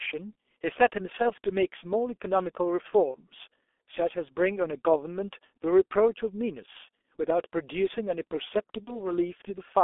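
The whole clip is speech squeezed through the G.723.1 codec, and it's heavily damaged. The band sits roughly between 300 Hz and 3.5 kHz, and the coding rate sounds like about 6.3 kbit/s. The result is muffled and hoarse, with smeared consonants, because the codec's slow-updating voice model can't keep up.

There's VoIP packet loss concealed by the speech codec at 1.22 to 1.31 s, 3.11 to 3.16 s and 8.85 to 9.11 s. Each gap fits a single lost 30 ms frame. At each one the decoder keeps extending its last pitch and filter with a fading gain, so you hear a brief smear of buzz or coloured noise that fades. The damage also lingers a bit after real audio resumes.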